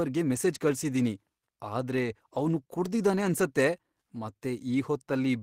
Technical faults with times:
none

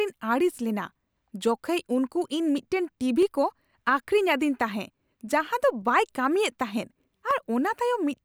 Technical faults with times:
1.18-7.31 clock drift buffer slips

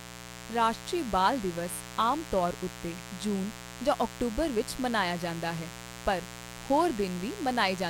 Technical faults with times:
0.00-7.89 mains buzz

